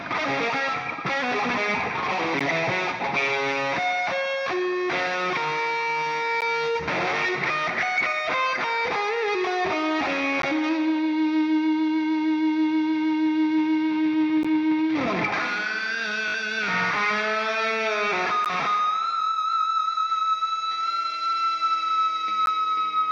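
Gaps between chunks occur at 2.39, 6.41, 10.42 and 14.43 s: 13 ms silent holes that interrupt the audio at each chunk join, seen as flat-line notches with hard edges. A Bluetooth stutter at 16.28 to 16.34 s repeats a short slice across about 61 ms of missing audio, consistent with three lost packets. It buzzes, then jumps ahead, showing as repeating identical waveform cycles. The gaps recur at 18.45 and 22.46 s, every 4.0 s.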